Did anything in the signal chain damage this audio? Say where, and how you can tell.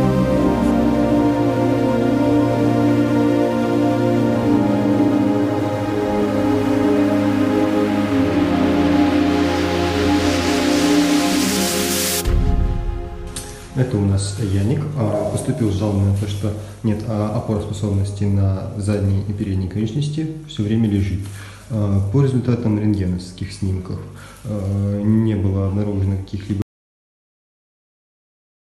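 Yes: an audio dropout to silence at 26.62 s, running to the end at 28.73 s. The sound cuts off abruptly into silence with no room tone, which points to the input stage: the source was likely lost, through a disconnect or mute, while the recorder kept writing silence.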